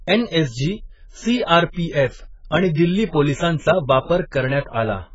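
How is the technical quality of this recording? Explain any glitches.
The recording's technical quality is limited by heavy lossy coding across the whole clip. Throughout, the speech is band-limited, with nothing above 7.6 kHz, and sounds dull and smeared. The likely cause is AAC compression at a very low rate, which fits AAC-LC near 12 kbps. The encoder discards the upper band and coarsely quantises the remaining frequency lines. That leaves spectral gaps or substitute noise, heard as a warbling, fizzy texture on sibilants.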